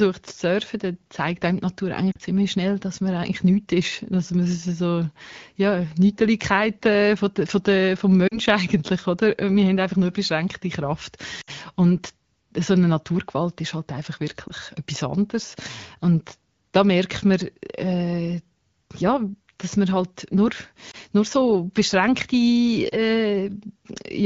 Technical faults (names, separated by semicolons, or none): lost AMR speech frames